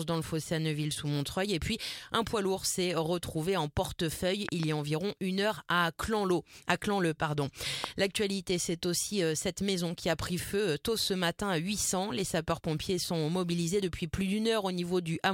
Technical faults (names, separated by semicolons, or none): loud pop